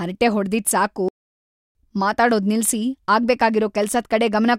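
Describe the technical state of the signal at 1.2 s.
At 1.2 s the speech is in the middle of a playback stall, a silent gap from 1.09 s to 1.75 s lasting about 0.67 s. The speech halts abruptly in mid-flow and the output drops to nothing until playback recovers, most likely because the player ran out of buffered data or its thread was blocked. On a waveform this appears as a flat, near-silent line; on a spectrogram, a clean blank vertical band across all frequencies.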